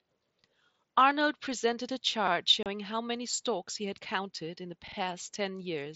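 Speech over an mSBC Bluetooth headset link carries a repeated buffer at 2.28–2.32 s, where a roughly 46 ms chunk plays twice, and again at 4.88–4.97 s, where it sounds three times. Each is a hard-jointed stutter of identical sound, which fits a 2048-sample buffer replayed when new audio arrived late. At 2.63–2.66 s, unconcealed Bluetooth headset packet loss leaves a 30 ms hole with abrupt edges. Unlike the repeats, nothing is duplicated here: speech simply drops out where headset packets went missing.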